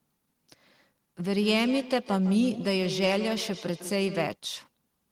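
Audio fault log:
1.36–4.40 s, feedback echo between two devices: the speech comes back at an interval of about 150 ms, and the repeats reach about 11 dB below the voice. A second device in the room is replaying this one's signal into a microphone whose echo canceller can only remove its own device's output, so the sound goes round the loop. A spectrogram shows evenly spaced ghost copies trailing each syllable, and the waveform shows a comb of repeats.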